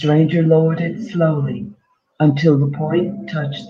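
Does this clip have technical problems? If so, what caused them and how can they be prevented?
Yes. There's clock drift between sender and receiver here: the sender's clock runs about 2% slow relative to the receiver's, so the receiver keeps consuming samples a bit faster than they arrive. The jitter buffer drains steadily across the whole speech clip, and the receiver has to keep stretching things out to avoid running dry. The fix is to lock both ends to a common clock, or have the receiver estimate the drift and resample smoothly.

That drift shows up as repeated timing corrections from about 0.06 s to 3.50 s. Playback runs at roughly 98% speed through that stretch, and the receiver repeats short slices of audio to fill the gap, adding up to around 70 ms of extra material. The repeats all go the same way, padding rather than cutting, and they're spaced unevenly. To prevent this, use adaptive resampling instead of abrupt repeat-based corrections so the adjustment is spread out and inaudible.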